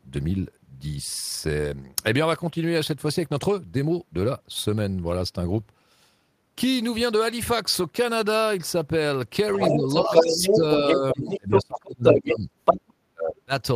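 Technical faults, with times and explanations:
9.54–11.14 s, 11.30–11.64 s, 11.84–12.36 s and 12.65–12.93 s: other side's voice leaking through. A second voice, a little louder than the talker, is audible, likely loudspeaker echo the canceller failed to remove.
9.56–12.49 s, 12.72–12.77 s and 13.10–13.53 s: speech suppressed in double talk. The talker dips by up to about 20 dB, then about 10 dB and about 35 dB, likely the echo canceller ducking both voices during overlap.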